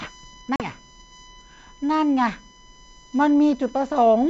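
Running under the whole clip there's a steady 1 kHz USB whine, a fixed-pitch tone roughly 30 dB below the speech. It comes from the USB bus pulling current in 1 ms frames and that ripple leaking into the audio through power or ground, so the pitch never wanders. It's quiet, sitting right in the band where the G.722 coding keeps things clear.

From 0.56 to 0.65 s there's packet loss on the ADPCM call: about 40 ms of audio, likely a couple of packets, drops out and is replaced by silence, leaving a hard-edged hole. ADPCM codes each sample from an adaptive prediction and step size, so once the decoder misses that stretch it falls out of sync with the sender. When the speech returns it comes back slightly distorted, then settles over the next few tens of milliseconds.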